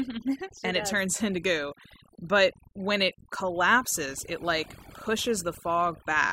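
From start to finish the speech shows overdone noise removal. A noise reduction stage was pushed too hard, so every frequency band that came close to its noise estimate was cut deeply or switched off entirely, taking the softer parts of the voice along with the noise. The pauses fall to near silence scattered with twinkling, chirpy specks.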